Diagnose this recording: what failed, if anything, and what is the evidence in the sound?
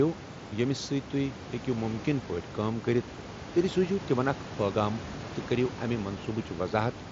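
Nothing failed: the room noise sits about 15 dB below the speech and belongs to the recording, and the top end stopping near 8 kHz, with only light graininess on louder passages, is what a Bluetooth mSBC headset link sounds like when it is working as designed.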